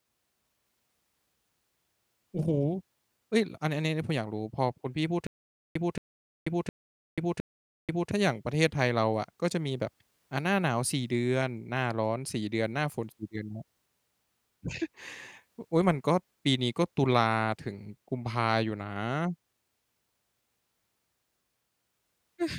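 From 5.27 s to 8.11 s the speech breaks into a stutter with silent gaps. A 224 ms fragment plays, 487 ms of dead silence follows, and the same fragment returns four times at a steady 711 ms spacing. The likely cause is a stalled stream replaying its last buffer on each retry, so the speech for that stretch is lost. A waveform shows identical blocks between flat silent gaps. A spectrogram shows matching patches separated by empty black columns.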